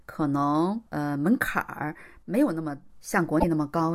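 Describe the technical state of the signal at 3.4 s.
A brief glitch interrupts the speech from 3.36 to 3.44 s, a disturbance of roughly 80 ms. This is damaged data in a compressed stream: some bytes in that stretch of the encoded audio were lost, zeroed or overwritten. The decoder misreads or discards the affected frames, loses its place and has to hunt for the next valid frame header before clean decoding resumes, and that scramble produces the glitch.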